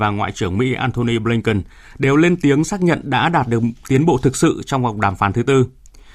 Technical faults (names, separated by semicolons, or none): none